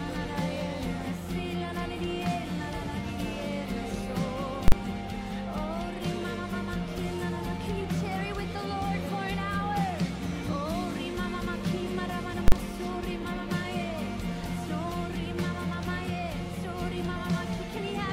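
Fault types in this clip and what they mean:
Invalid numbers at full scale: a calculation produced infinite or invalid values, which the output pinned at one extreme value for a 40 ms block, from 4.68 to 4.72 s and again from 12.48 to 12.52 s. Each block is short enough to come across as a single loud bang.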